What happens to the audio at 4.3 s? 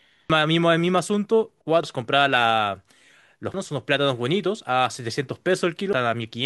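Nothing goes wrong at 4.3 s; the speech carries on intact through that moment, with no dropout, click or distortion to be heard.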